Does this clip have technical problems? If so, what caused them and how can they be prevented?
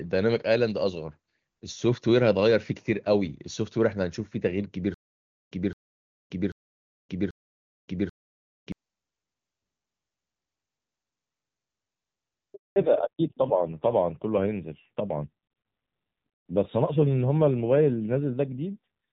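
Yes. From 4.94 to 8.72 s there is a stutter with silent gaps. The same burst of about 216 ms plays four times, each followed by about 572 ms of digital silence, a cycle of about 788 ms. The likely cause is a stalled player or stream that replayed its last buffered fragment at each retry and then ran dry. The waveform shows four identical blocks separated by flat silent lines, and the spectrogram shows repeated identical patches with black columns between. A larger jitter buffer and concealment that fades out, instead of replaying the buffer, would prevent it.

At 12.54 s a handover gap begins and lasts 220 ms, until 12.76 s. The call moved between networks and no frames arrived during the switch, so the sound decays within a few tens of milliseconds and then stays silent. The waveform shows a short taper into a flat line, and the spectrogram shows a clean vertical blank band. Better handover preparation on the network side, with the new link established before the old one is released, would avoid it.

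From 12.76 s to the end, the call falls back to narrowband, dropping from AMR-WB at 23.85 kbit/s to AMR-NB at 7.4 kbit/s. Before the drop, the wideband codec is clean and reaches up toward 7 kHz. After it, nothing remains above 4 kHz, and the low bitrate adds roughness. On a spectrogram, the energy stops at a hard horizontal ceiling at 4 kHz. Keeping both ends and every network leg HD Voice-capable would prevent the fallback.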